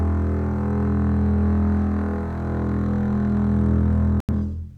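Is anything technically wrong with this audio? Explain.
Yes, two compressed-frame errors are audible.

At 0.84 s, a corrupt frame decoded: flipped bits were played anyway, putting energy at wrong frequencies. It is a brief disturbance with an error peak of about -30 dBFS.

From 4.20 to 4.34 s, a corrupt frame muted: the decoder rejected damaged data and silence replaced it. The abrupt 0.13 s hole, which fits two dropped frames, keeps timing.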